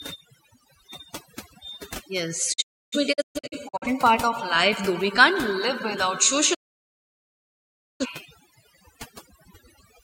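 Speech, with a noise reduction stage set far too aggressively throughout: overdone noise removal. The processor pulls down any frequency band that comes close to its noise estimate, so the quieter components of the voice are stripped away along with the hiss. The background sinks and breaks up into twinkling, chirpy specks, and the voice loses its softer detail.

There are also two digital broadcast dropouts, where the receiver stopped getting usable frames and muted until clean data returned. Each cut fades out over about 20 ms. From 2.52 to 3.87 s the signal breaks up into several short holes spread across about 1.3 s, adding up to roughly 0.68 s of missing audio, with the longest single gap about 0.3 s. From 6.53 to 8.06 s the outage is one solid silence of about 1.45 s. Whatever was broadcast during these gaps is gone, and the speech picks up again afterwards.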